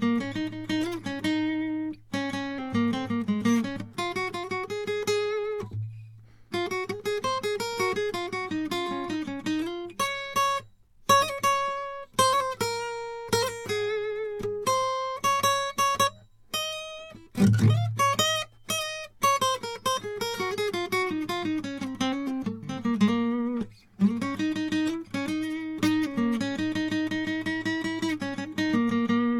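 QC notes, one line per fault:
No faults found in this music clip.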